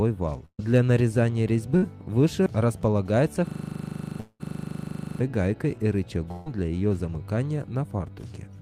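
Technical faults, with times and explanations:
0.45–0.61 s, 1.77–1.84 s, 6.32–6.48 s, burst of packet loss: three short gaps of about 140 ms, 60 ms and 140 ms where the receiver stretches the last bit of sound and fades it. The first dies to silence for its final 80 ms, and each skips ahead afterwards.
3.47–5.20 s, system hang loop: a 40 ms slice of audio repeats exactly 43 times, giving a rough 25 Hz buzz-rattle for about 1.7 seconds. Something froze while the audio hardware kept replaying the same buffer.
4.20–4.42 s, long network dropout: inside that looping stretch, a fading fill runs for roughly 195 ms and drops to about 50 ms of silence. The sound then picks up later, with around 200 ms gone, likely from a network dropout.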